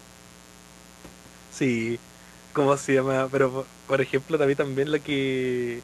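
A steady, raspy buzz runs under the speech from start to finish, sitting roughly 25 dB below it. This mains buzz comes from sharp switching spikes entering the signal twice per 60 Hz cycle, spreading harmonics well up into the kHz range.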